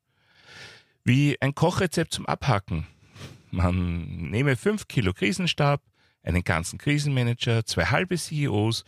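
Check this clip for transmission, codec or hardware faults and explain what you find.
Nothing wrong turns up anywhere in this speech recording.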